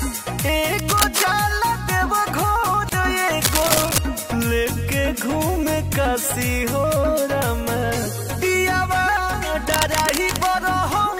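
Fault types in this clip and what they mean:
Cable scratch noise: Uneven bursts of scratching rustle over the sound at 0.76 to 1.26 s, 3.43 to 3.98 s and 9.7 to 10.48 s. The first two are about as loud as the signal, the last about 5 dB quieter. A likely cause is a worn cable or connector being moved.
Gap at a join of encoded pieces: At 2.89 s the continuous sound drops out for about 30 ms, then resumes where it stopped. The codec smears its edges. Separately encoded pieces were joined with their start delay and end padding left in.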